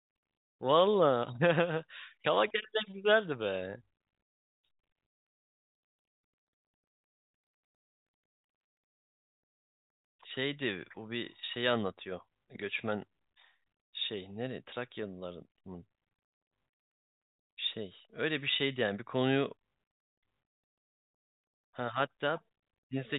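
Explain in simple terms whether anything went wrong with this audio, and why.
Nothing went wrong here: the speech has the slightly narrow, boxed-in sound of ordinary G.711 telephone coding, which lets nothing above 4 kHz through, and that's just how a normal phone line sounds rather than a problem.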